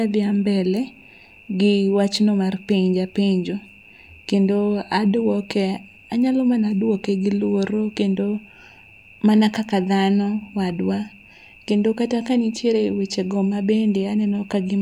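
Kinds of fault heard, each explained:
Nothing technical gets in the way in this speech recording; there's no fault to point to anywhere in it.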